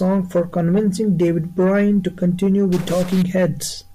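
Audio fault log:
2.72 to 3.22 s, stuck bit: for about half a second the speech turns harsh and buzzy, and the gaps between sounds fill with a gritty noise floor rather than going quiet. That points to one data bit likely stuck at a fixed value, so roughly half the samples get knocked off by a step of around -30 dBFS. Quiet passages flip sign constantly, so the error chatters there and you hear it as noise.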